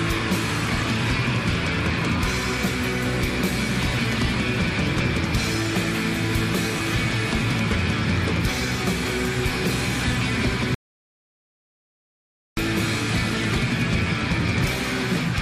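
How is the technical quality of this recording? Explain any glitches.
There is one clear glitch: an audio dropout to silence from 10.75 s to 12.57 s. For about 1.83 s the sound cuts out mid-flow into silence, with no room tone, then resumes abruptly. The input was likely lost, through a disconnection, link failure or mute, while the recorder kept writing silence, so that stretch of audio is gone.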